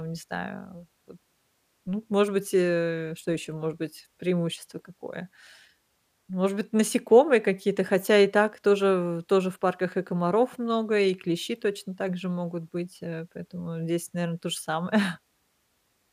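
A speech recording with no technical fault to report. Nothing in the audio calls for a time, a value or a cause.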